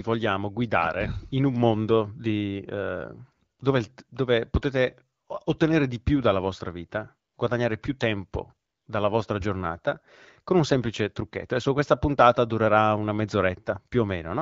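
No technical faults are audible in the speech, which has the band-limited sound of AMR wideband (HD Voice) coding, reaching up to about 7 kHz with only light coding traces, consistent with a rate around 12.65 kbit/s.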